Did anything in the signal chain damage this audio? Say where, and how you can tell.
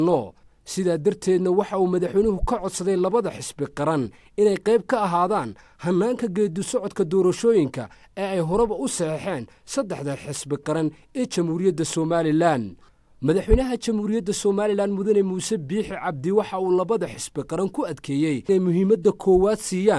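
No, nothing in the signal chain audibly damaged this audio. No stage, from capture through to playback, leaves a mark that can be heard.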